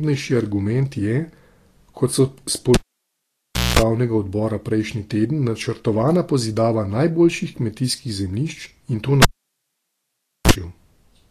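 The speech sounds hissy and grainy throughout. The treble has turned to noise rather than detail. Tones sound rough and attacks are blurred. The damage is plainly audible from start to finish. This is likely Vorbis compression at low quality. The codec lowers its cut-off and quantises the high bands very coarsely. Fine detail is swapped for noise of similar energy. The result fits a low bitrate of around 36 kbps.

At 2.74 s, right after "kot so", a cable is pulled and plugged in. A pop marks the break. The sound drops to near silence for about 1.0 s. A 60 Hz mains buzz lasts about 0.21 s while only the tip makes contact. A second pop brings the sound back at 3.79 s, just before "odbora prejšnji teden načrtovana".

It happens again at 9.22 s, after "in to". The cable is out for about 1.24 s. This time the 60 Hz buzz is much shorter, about 37 ms. Pops open and close the gap, and the sound returns at 10.51 s.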